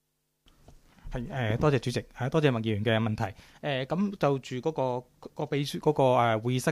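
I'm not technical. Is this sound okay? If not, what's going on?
Yes, nothing is wrong with this sound.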